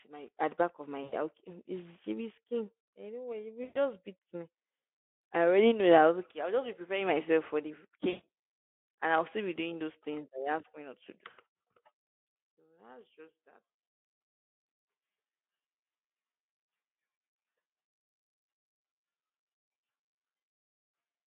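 VoIP packet loss concealed by the speech codec breaks up the speech four times: at 1.03–1.13 s after "the back of my", at 3.63–3.78 s before "beat me", at 8.09–8.25 s after "preparing myself for the", and at 15.35–15.41 s. Packets went missing, so the decoder guessed forward from its last sound, with about 60 to 140 ms lost each time. Each gap becomes a fading buzzy tone or coloured noise.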